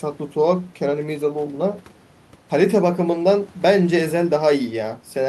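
Nothing in this speech recording stood out as a technical problem on listening.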